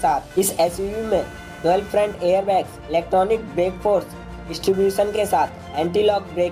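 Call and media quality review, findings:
Computer activity noise, whole clip. Buzzing chirp that rises and fades with machine load, independent of the audio. Pulses at around 500 Hz, roughly 25 dB below signal. Probable component: shared ground between CPU/GPU/mouse circuitry and the audio path, with load-current swings modulating that ground. Spectrogram: stacked harmonic lines on a 500 Hz spacing, flickering on and off with activity. Waveform: fine ripple riding under the signal, bursting in clusters.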